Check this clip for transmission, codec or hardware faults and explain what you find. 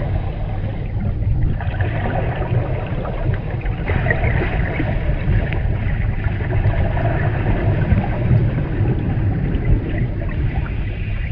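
Nothing stood out on listening to this recording.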